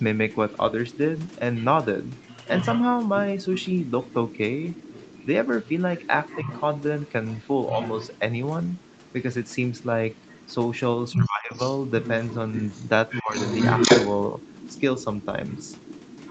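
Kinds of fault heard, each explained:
Other side's voice leaking through: A second voice runs under the talker's speech from about 0.34 s to the end. It sits roughly 10 dB below the main speech. This is likely residual echo. The far side played on the talker's loudspeaker and reached the microphone. The echo canceller did not strip it out fully before the signal was sent.
Speech suppressed in double talk: The talker's speech dips in three places. At 6.43 s there is a slight, very short drop. From 11.13 to 11.59 s the speech sinks by around 25 dB for almost half a second. From 13.22 to 13.37 s it falls by around 20 dB. These dips likely come from the echo canceller hearing both sides at once and turning everything down.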